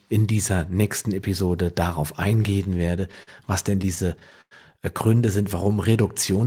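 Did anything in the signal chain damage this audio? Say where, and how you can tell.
Yes. Repeated stalls (stutter) at 2.42–3.29 s and 3.71–4.53 s, seven gaps each (longest 44 ms, then 99 ms): late network packets emptied the jitter buffer, and the receiver stretched the last sound.

Jitter buffer slow-down at 5.64–6.34 s: the receiver repeated pitch periods to rebuild its reserve, adding 67 ms, so the speech runs at 92% speed without changing pitch.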